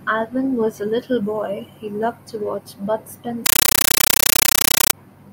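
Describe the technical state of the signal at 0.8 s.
At 0.8 s the speech signal is intact, with no audible technical fault at that moment.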